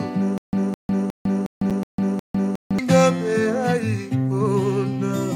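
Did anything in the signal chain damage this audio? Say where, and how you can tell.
Yes. From 0.38 to 2.79 s there is a stutter with silent gaps: a 209 ms burst repeats six times, every 361 ms, with 152 ms of silence between. The likely cause is a stalled playback stream replaying its last fragment. The repeats are identical and the missing audio never returns, which tells it apart from an echo.

At 1.70 s, an 8 ms block of digital silence at the driver or buffer stage: the signal drops to silence with no fade, and a gap this short is heard as a tick or dip.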